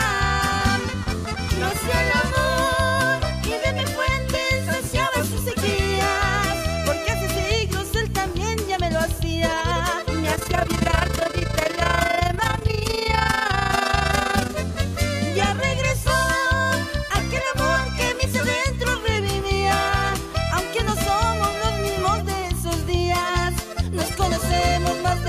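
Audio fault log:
10.36–14.54 s, overlap-add ripple: rough flutter around 30 times a second, level swinging about 11 dB, because overlapping frames failed to sum evenly.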